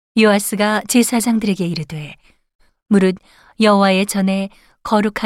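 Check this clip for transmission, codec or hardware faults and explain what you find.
No transmission, codec or hardware faults can be heard in this speech clip. Nothing in the recording calls for further explanation.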